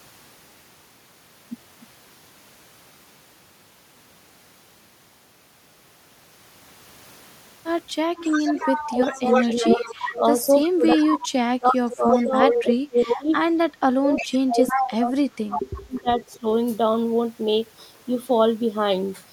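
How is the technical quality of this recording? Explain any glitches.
The recording is clean until about 8.2 s. From then until about 16.5 s, two faults that are typical of speakerphone echo cancellation overlap.

Echo leak at 8.16–11.09 s, 11.90–13.16 s and 14.17–16.39 s: a loudspeaker-side echo canceller likely failed to remove its microphone's pickup of the call and sent it back. A copy of the speech trails about 350 ms behind, first well below the speech, then nearly as loud.

Speech suppressed in double talk, 8.84–16.46 s: with both sides talking, the echo canceller likely could not separate the local talker from the loudspeaker echo and attenuated both. The speech dips by up to around 30 dB, in pieces totalling roughly 5 s.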